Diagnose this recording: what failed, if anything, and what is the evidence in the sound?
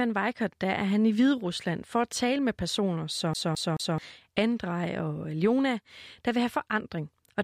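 The fault is at the playback stage, a CD stuck on one turn. From 3.34 to 3.98 s the same 0.22 s slice of speech repeats three times, each jump marked by a brief mute, as the laser falls back one track per revolution. Packet-loss concealment, by contrast, smears or fades rather than replaying an identical slice at a steady rate.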